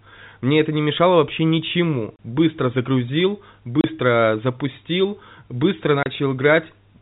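Right after "не мешало вообще ничему" at 2.16–2.19 s, before "запустил быстро" at 3.81–3.84 s, and after it at 6.03–6.06 s, packet loss filled with silence drops a single 30 ms packet each time, leaving hard-edged gaps over the band-limited G.711 telephone sound.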